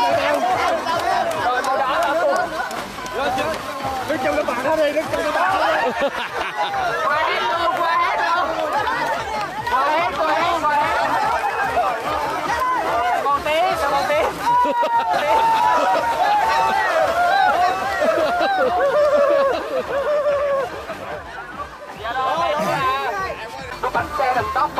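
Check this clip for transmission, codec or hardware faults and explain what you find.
There's one fault here, a doubled audio track between 15.13 and 21.15 s. For those six seconds a second full-band copy of the sound runs about a second behind the original, a few dB quieter, with no decay or room colour, so it's clearly a straight duplicate, not a reflection. It likely comes from the same signal being captured again through a slower path and mixed back in. It cuts in and out abruptly at both ends.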